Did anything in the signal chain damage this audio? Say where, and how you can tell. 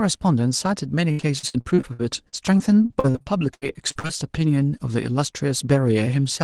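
Yes, at the network. From 1.11 to 4.11 s, repeated packet loss leaves frequent holes. Each is patched by stretching prior sound, giving choppy, robotic speech.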